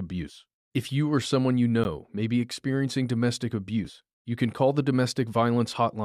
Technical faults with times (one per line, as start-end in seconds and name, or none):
1.84 gap between stream segments
3.85 gap between stream segments